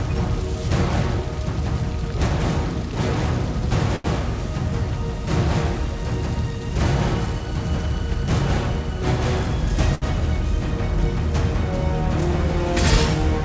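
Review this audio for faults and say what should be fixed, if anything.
Two short stalls from a late packet, at 3.96–4.06 s and 9.95–10.04 s. The jitter buffer ran dry and stretched the last sound by 83 ms and 67 ms, then resumed with nothing missing. Unlike a packet-loss dropout, nothing is skipped: the sound just hangs briefly. In this G.722 call path, nothing above 8 kHz is heard. To prevent the stalls, give the jitter buffer more headroom or reduce network delay variation.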